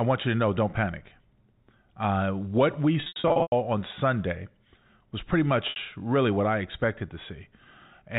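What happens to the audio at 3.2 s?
Packet loss with pitch repetition, 3.0–3.52 s: scattered dropouts totalling 340 ms, bridged by repeating the last pitch period. They sound buzzy and held, and the longest run of 100 ms fades toward silence. A spectrogram shows frozen, flat harmonic stripes and fading gaps.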